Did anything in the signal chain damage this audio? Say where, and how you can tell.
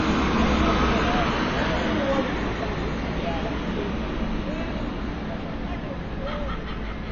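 Yes, at the codec stage: AAC compression runs through the whole clip, likely from a low-bitrate AAC-LC encode that fits about 24 kbps. A spectrogram shows a hard ceiling near 6.9 kHz, with holes and noisy patches below it. The sound is dull, smeared and warbly throughout, because coarse quantisation drops and substitutes frequency bands.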